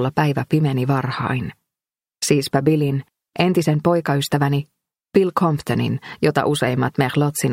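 No technical faults can be heard anywhere in the clip.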